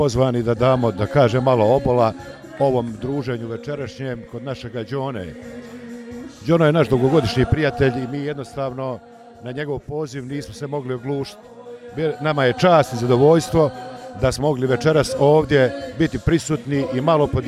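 At 2.28 s the level drops by roughly 10 dB over about 1.3 s, and you get zipper noise. The gain is stepped about fifty times a second with no smoothing, so each tiny jump leaves a click and the whole move buzzes. The same thing happens on a shorter cut at 7.87 to 8.24 s, with steps of about 1 dB, and again as the level comes back up around 10 dB at 11.73 to 12.63 s.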